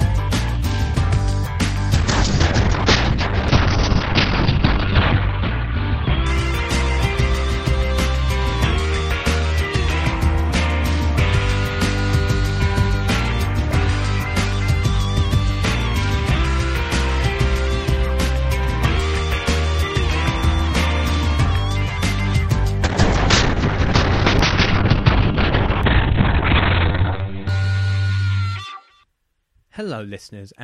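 At 1.94 s the audio turns coarse and muffled. This is a call bitrate drop. The encoder was starved of bits, which fits a fall from around 128 kbps to near 6 kbps. Highs vanish above about 6 kHz. It sits at its worst for about 1.07 s, then recovers by 7.82 s. A second drop starts at 22.84 s. Bandwidth narrows to about 4 kHz. The worst stretch lasts 3.39 s, and the drop ends at 30.29 s.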